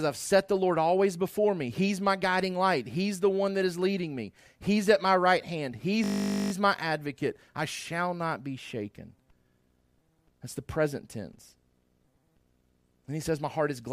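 Speech clip with a system hang loop from 6.04 to 6.52 s: a 20 ms slice of audio repeats exactly about two dozen times, producing a steady 50 Hz buzz while the driver is stalled and the hardware keeps replaying the same short ring buffer.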